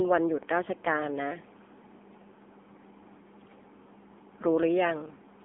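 Speech heard entirely through the AMR narrowband mobile codec. The band is cut at 250 Hz and 3.5 kHz, which leaves an empty flat ceiling on a spectrogram. Heavy buzzy, synthetic coloring from coarse pulse-driven vocal-tract modelling fits a low mode near 6.7 kbps.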